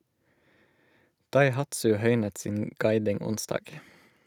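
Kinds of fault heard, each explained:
No kinds of fault are heard in this speech clip.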